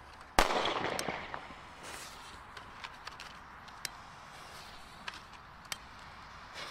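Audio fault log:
No audible faults detected anywhere in the sound.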